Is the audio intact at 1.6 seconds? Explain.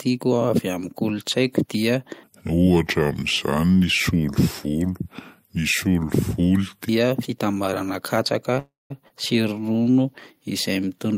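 Yes, at 1.6 seconds the audio is intact, with no dropout, click, distortion or other fault to be heard.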